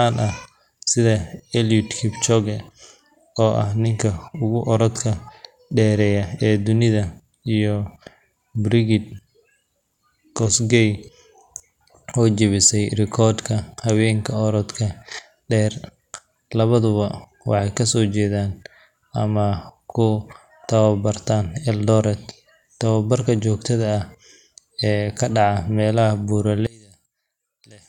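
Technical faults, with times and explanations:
26.67 to 27.89 s, one channel inverted: the speech falls away by about 27 dB, leaving only a faint residue. The likely cause is one stereo channel with reversed polarity, so the centred speech common to both channels cancels when they are summed to mono.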